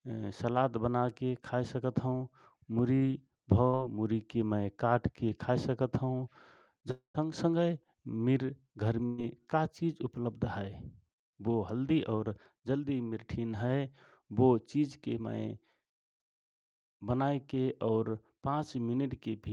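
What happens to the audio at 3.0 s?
A burst of packet loss hits from 2.95 to 3.04 s. Audio stopped arriving in time, so the receiver stretched the last sound for about 60 ms, fading it out, then resumed with roughly 60 ms of the original audio skipped.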